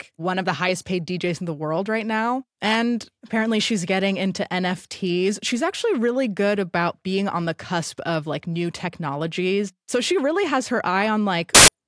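At 11.55 s, near the end of the speech, file tags played as audio cut in. An embedded cover picture's compressed bytes were read as samples. That gives very loud white noise. It is a hard-edged burst of static lasting until 11.68 s.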